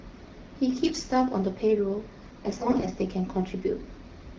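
From 0.84 to 1.10 s and 2.44 to 2.88 s, AMR bit errors misplace the codec's excitation pulses, making speech hoarse and gargly; spectrogram harmonics smear into scratchy noise.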